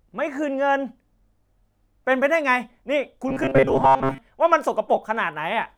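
A speech clip where, from 3.28 to 4.18 s, the voice collapses into a rigid metallic buzz at 134 Hz: robotic sound from repeated short buffers. Most of that stretch is likely a roughly 7.5 ms chunk looped in place of skipped audio.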